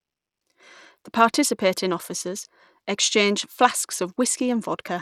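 Throughout this speech clip the top end is thin and unstable: the treble keeps dropping out and flickering back, and a gritty, grainy noise with aliasing rides on the sound from start to finish. The damage is plainly audible and points to Bluetooth SBC compression at a low rate, likely an SBC stream near 96 kbps, where the upper sub-bands are starved of bits and the rest are coarsely quantised without any hearing model.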